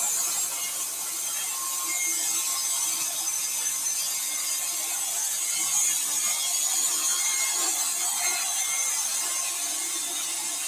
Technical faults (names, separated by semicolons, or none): noise suppressor applied to music or sounds